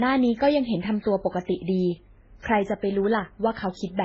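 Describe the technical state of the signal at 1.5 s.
At 1.5 s the speech is dull and smeared, with nothing above 7.8 kHz, as across the whole clip. This is likely transcoding between lossy codecs: stacked low-bitrate encodes, each adding artefacts on the last.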